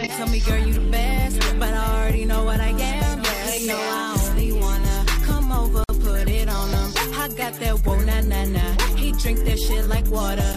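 The audio has one fault: a gap at a join of encoded pieces. At 5.84 s the sound drops out for about 52 ms, then resumes at 5.89 s exactly where it left off. The edges are smeared by the codec. This points to separately encoded pieces being joined without trimming. The encoder's start-up delay and the padding on the last frame both remain, leaving a short hole of silence in continuous sound.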